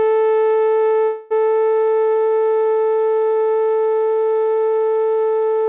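At 1.04 s the music stalls into a call audio freeze until about 1.33 s, roughly 0.27 s of fading buzz stretched from the last sound, likely because packets were held up and the jitter buffer ran dry. Playback then picks up where it stopped, nothing lost, just running 265 ms later, all heard through a band capped at 4 kHz that points to a G.711 A-law call path.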